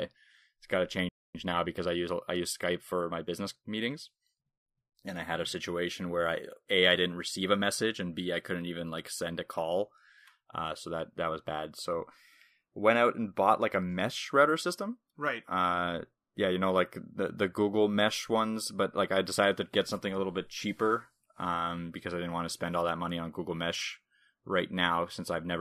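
A speech clip with a playback stall from 1.09 to 1.35 s, just after "it's got to": the output drops to silence for about 260 ms mid-phrase, then resumes where it left off, likely because the player's buffer ran dry or its thread was blocked. Time-compressed catch-up follows from 1.35 to 3.91 s. The player trims its backlog by cutting small segments and cross-fading the joins, so the speech runs about 1.1 times fast at normal pitch until it is back in step.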